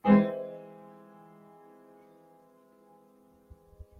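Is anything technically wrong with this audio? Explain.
Yes, there's a noise suppressor applied to these sounds, and it runs the whole way through. A speech-tuned suppressor treats sustained tones and ambience as noise and pulls them down by roughly 10 dB, so the sound pumps and thins out as it clamps on and off.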